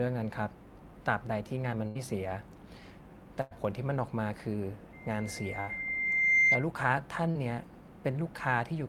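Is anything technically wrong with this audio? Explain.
Yes, a few things. This is speech with dropouts and a feedback squeal layered over the middle.

There are three bursts of packet loss, at 1.87 to 1.97 s, 3.41 to 3.53 s and 5.61 to 5.69 s. Each time a run of packets didn't arrive in time, so the receiver kept extending the last bit of sound and faded it down, roughly 60 to 100 ms of cover per gap. You hear a held buzz or a fading hiss, and then the speech picks up a little further on, with that stretch simply gone.

From 4.93 to 6.67 s there's a loudspeaker feedback squeal. The mic is picking up the speaker it feeds, and at 2.1 kHz the loop gain tipped past one, so that tone kept reinforcing itself. It swells over roughly a second and a half into a piercing whistle sitting about 10 dB above the speech, and the third dropout lands right in the middle of it.

At 7.31 to 7.37 s there's a short concealed packet loss, about 40 ms missing. 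The decoder bridged the hole by carrying the previous sound forward and then blending back into the real audio. It sounds like a quick smear or wobble, and a short consonant in there could easily get swallowed.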